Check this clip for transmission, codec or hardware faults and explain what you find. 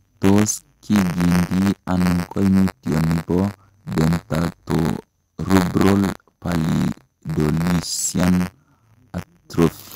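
There is one fault, buffer tearing, running through the whole clip. The software filling the playback ring buffer and the hardware draining it have drifted out of step, so their positions cross inside every period. A small slice of each buffer, roughly 3 percent, still holds audio from about 30 ms earlier, spliced in with hard edges. Over the speech this produces a steady robotic rattle at 93.8 Hz, a rate which fits a 512-sample buffer.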